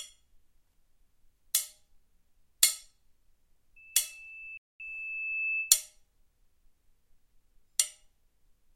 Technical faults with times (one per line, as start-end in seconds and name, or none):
3.76-5.86 loudspeaker feedback squeal
4.57-4.80 playback stall